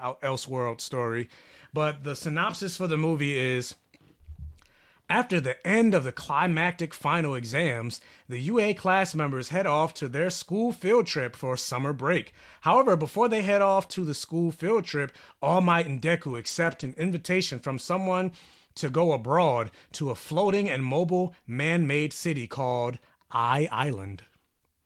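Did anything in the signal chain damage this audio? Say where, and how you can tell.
Yes. At the network stage, with the codec's error correction recovering lost packets: 2.49–2.55, 6.47–6.73, 7.51–7.53, 13.83–13.85 after "before they head", 13.91–14.05, 14.87–14.89, 16.27–17.01, and 20.45–20.67 between "go abroad to a" and "and mobile man made". There are no gaps. Those stretches turn rough and noisy. That is lost packets being rebuilt from low-bitrate copies carried in the next packet.

A short concealed packet loss sits at 13.87–13.91, just before "the school field". About 20 ms never arrived. The decoder extended the previous sound to fill it, then blended back. It is heard as a brief smear or wobble.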